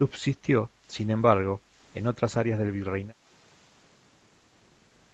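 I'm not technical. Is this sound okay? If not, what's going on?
No. The background is gated by the echo canceller twice, from 0.69 to 0.86 s and from 1.62 to 1.77 s. Each time, the room sound briefly dips for a split second. The call's echo canceller turned the microphone down while the other side played, then let go.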